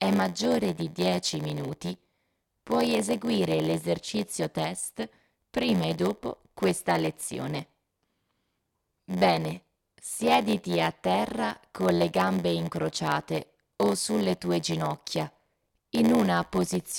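A block size mismatch (padded) runs through this whole speech recording: one stage writes shorter blocks than the next reads, which fits a 512-sample read, and zeros fill each shortfall. The gaps cause an 86.1 Hz buzz, and playback runs at 0.938× speed with timbre unchanged.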